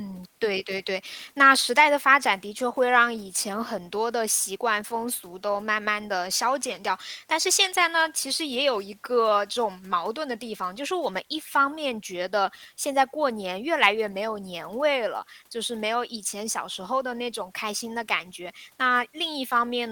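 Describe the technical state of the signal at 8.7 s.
At 8.7 s the speech signal is intact, with no audible dropout, click, distortion or other technical fault at that moment.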